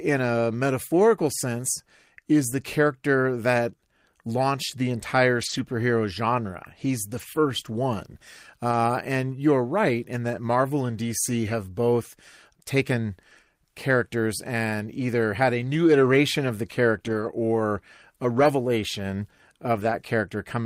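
A speech recording with seven stretches of lost packets rebuilt from error correction, at 2.51–2.53 s, 5.37–5.59 s (after "that launched the entire"), 7.09–7.23 s, 8.71–8.73 s, 17.05–17.27 s (after "new iteration of the", before "or a"), 18.39–18.45 s (after "or a") and 19.75–19.93 s. Each lasts 20 to 120 ms. There is no dropout. The decoder substituted the low-bitrate redundant copy carried in the following packet, so those moments turn coarser and noisier. The longer spans point to several consecutive 20 ms frames being replaced.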